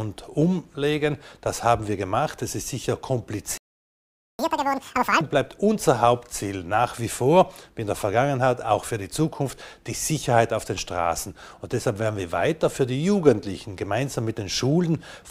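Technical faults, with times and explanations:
3.58 to 4.39 s, playback stall: the sound just cuts out mid-flow for about 0.82 s of dead silence, then picks up again. That's most likely the player running dry on data or its thread getting blocked, so nothing reached the output until it recovered.
4.39 to 5.21 s, catch-up at higher speed: right after the gap the audio runs at double speed and jumps up in pitch by roughly ten semitones, not quite an octave. The player is resampling its backlog to claw back the lost time, then drops to normal.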